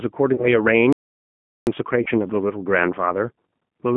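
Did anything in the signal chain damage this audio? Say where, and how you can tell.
Yes. At the codec stage, the whole clip carries the G.729 codec's signature at 8 kbit/s. The speech sits in a telephone band of roughly 150 Hz to 3.4 kHz, with nothing above, and has a plainly audible rough, synthetic grain. That comes from the codec discarding the waveform and rebuilding each 10 ms frame from a vocal tract filter, a pitch predictor and a handful of pulses. What those cannot model is lost.

At the network stage there are two instances of VoIP packet loss concealed by the speech codec, at 0.35 to 0.48 s and at 2.03 to 2.09 s. Each covers about 30 ms of missing audio, which fits a single lost packet. The decoder fills the gap by repeating its last pitch and filter at falling gain. This produces a brief, fading stretch of stretched-out sound, and the sound stays weakened for a short while after real packets resume.

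From 0.93 to 1.67 s there is an audio dropout to silence lasting about 0.74 s. The sound cuts off mid-flow and returns abruptly, and the gap is silent with no background noise. The likely cause is lost input upstream of the encoder, such as a disconnected device or failed link, while the recorder kept writing silence. Whatever was spoken in that interval is gone.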